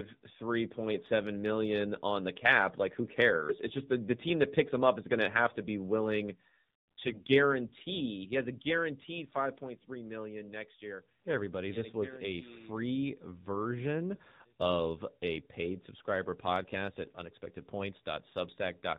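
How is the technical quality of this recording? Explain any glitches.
The recording is clearly degraded by narrowband mobile coding for its whole length. The speech sounds like a phone call, with audible codec damage.

AMR narrowband mobile codec, throughout: the speech has passed through AMR-NB, which rebuilds the voice from a vocal-tract filter excited by sparse pulses in short frames. The buzzy, synthetic edge points to a low mode, around 7.4 kbps. Everything above 4 kHz is gone, consistent with 8 kHz sampling, so sibilants sound dull and boxy. A spectrogram shows a hard ceiling at 4 kHz with nothing above it.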